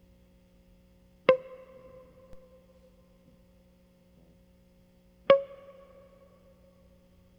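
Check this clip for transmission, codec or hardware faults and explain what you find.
There is one hardware fault, a DC step. At 2.33 s the waveform's zero line jumps by about -39 dBFS, as when a converter shifts its offset. A 5 Hz high-pass then bleeds the offset away. It sounds like a low thump under the continuing music.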